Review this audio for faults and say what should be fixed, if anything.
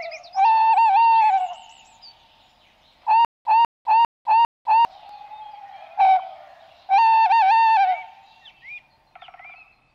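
From 3.25 to 4.85 s the same 197 ms burst plays four times, each followed by 203 ms of dead silence, a steady 400 ms stutter with silent gaps. This is likely a stalled player replaying its last buffered fragment at each retry; the audio for that span is lost. Larger playback buffering and proper underrun handling, with recovery instead of replaying stale data, would prevent it.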